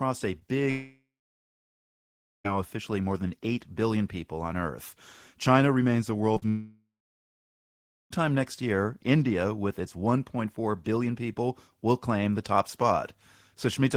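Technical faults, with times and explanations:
0.39–0.43 s, short concealed packet loss: About 20 ms of audio arrived too late for the decoder, so the receiver extended the preceding sound for roughly 12 ms and blended back in. The result is a brief smear or wobble in the speech.
0.71–2.46 s, long network dropout: A stall in delivery, likely on the network path, left about 1.74 s without incoming audio. The last sound is stretched into a fading buzz or hiss, then about 1.37 s of silence follows before speech resumes with that stretch missing.
6.34–6.44 s, short concealed packet loss: Two back-to-back gaps of 20 ms and 40 ms were filled by continuing the prior sound's pitch or noise. This produces a short wobble where part of a sound may blur or vanish.
6.49–8.12 s, long network dropout: Audio likely stopped arriving over the network for about 1.62 s. The concealment carries the last sound on as a decaying buzz or hiss, then about 1.22 s of silence follows until speech returns with that portion lost.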